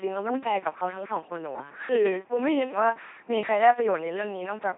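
Speech has been pushed through an LPC-10 vocoder for its whole length, which fits a very low 2.4 kbit/s link. The system keeps only a short all-pole model of the vocal tract and excites it with either a pulse train or noise, deciding fully voiced or fully unvoiced at each moment. The result is heavily damaged: a buzzy, mechanical robot voice with nothing above 3.7 kHz, so the sound is dull and synthetic throughout.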